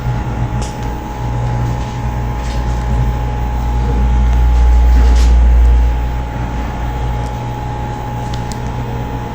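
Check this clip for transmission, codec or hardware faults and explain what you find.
Nothing here points to a transmission, codec or hardware problem; the audio runs along steadily with no dropouts, glitches or odd artefacts to flag.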